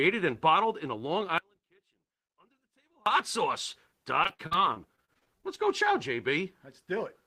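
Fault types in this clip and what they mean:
Audio dropout to a faint residue: From 1.38 to 3.06 s the speech abruptly vanishes for about 1.7 s, leaving only a faint sound around 35 dB down, likely a break with the path still live. The waveform collapses to a thin band and the spectrogram goes nearly blank, with hard edges.
Repeated packet loss (robotic sound): Between 4.23 and 5.50 s the speech turns choppy as a dozen or so short holes, the longest 56 ms, are patched by stretching the preceding sound. About 23% of the span is filled this way, about 280 ms in all, with about 200 ms simply missing. The spectrogram shows smeared, repeated slices and vertical breaks.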